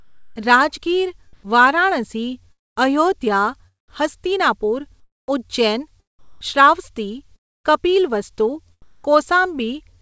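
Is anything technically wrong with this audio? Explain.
Yes, there are two kinds of problem.

Comfort noise in place of the background shows up at 0.00–0.36, 1.33–1.43, 5.00–5.28, 6.19–7.66 and 8.82–9.04 s. The room tone turns into a flat, featureless hiss, most likely because discontinuous transmission stopped sending during pauses and the receiver generated noise instead. That noise sits about 8 dB lower, about 3 dB higher, about 18 dB lower and about 3 dB lower in the gaps where a change is noticeable.

A long network dropout hits at 2.52–2.78 s and again at 7.36–7.66 s. Each time, about a quarter-second of audio is likely lost in transit. The receiver stretches the last sound very briefly, and then it's essentially silent before the audio resumes with that chunk gone. Everything here sits below 8 kHz, which fits a G.722 call path.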